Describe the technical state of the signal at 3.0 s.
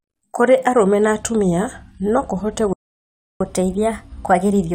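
At 3.0 s the signal is in the middle of a playback stall running from 2.73 to 3.41 s. The player most likely ran short of data, or its output thread was held up, so nothing reached the output for about 0.67 s. Right after "na atumia no kũhote" the speech cuts off mid-flow and the output falls completely silent for that stretch, a gap too long to pass as a natural pause, before sound returns at 3.41 s.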